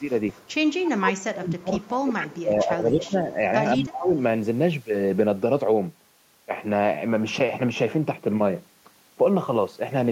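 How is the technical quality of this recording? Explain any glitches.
The first 4.2 seconds have two call-processing problems.

An echo leak shows up at 0.0–0.54, 0.7–0.89, 1.78–1.9, 2.21–2.26 and 3.81–3.97 s. It's a copy of the speech trailing by 186 ms, about 10 to 30 dB below the speech, likely a loudspeaker echo the canceller missed.

Speech suppressed in double talk hits at 0.99–1.84, 2.03–3.29 and 3.76–4.15 s. The speech dips by up to about 25 dB, likely because the canceller clamped down during overlapping talk.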